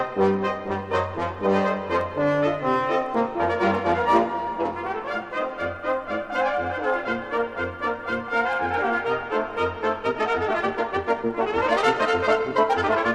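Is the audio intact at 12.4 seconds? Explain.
No. From 9.97 s to 13.15 s the sound runs about 1.7 times faster yet keeps its pitch, giving a rushed time-stretched section, likely from software dropping short pieces to shorten it. A wrong playback speed would raise the pitch too.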